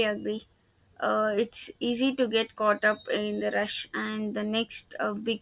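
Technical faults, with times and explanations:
No technical faults with times and explanations can be given, as none occur in this speech.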